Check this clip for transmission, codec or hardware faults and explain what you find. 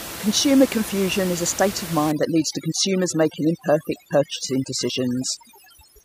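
One fault is present in this speech clip, and it is a processing fault rather than a transmission or hardware one. Overdone noise removal starts at 2.1 s, right after "is a state of", and runs to the end. The reducer, set far too strong against room noise sitting about 12 dB below the speech, shuts off individual frequency bands near its noise estimate and takes quiet speech detail with them. The background drops and breaks up into twinkling specks. A spectrogram shows scattered isolated dots between words and gaps in the speech harmonics, and the waveform's noise floor flattens abruptly at 2.1 s.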